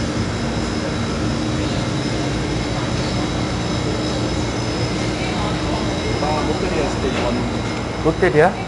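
From start to finish the clip carries 4-bit ADPCM compression, and it's plainly audible. Each sample is stored as a small 4-bit step from a predicted value, so the coding error rides along with the signal as a gritty hiss that gets louder as the sound does. Nothing comes through above about 10.7 kHz, which dulls the top end and fits a sample rate near 22 kHz, and the data rate sounds like roughly 89 kbps.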